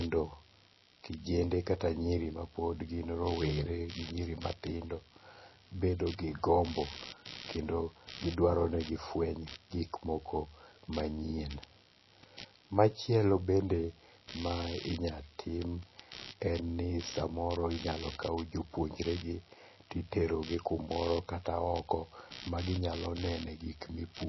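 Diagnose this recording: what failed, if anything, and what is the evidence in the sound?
Computer activity noise, an analogue wiring and ground fault: a buzzing pulse train near 70 Hz runs throughout, roughly 20 dB below the speech, visible as evenly spaced ticks on the waveform and harmonic stripes on a spectrogram.

The speech sounds plainly watery and swirly, with nothing above 5.8 kHz. This is likely MP3 compression at a low bitrate near 24 kbps. A spectrogram shows a flat ceiling and flickering gaps where weak bands drop out.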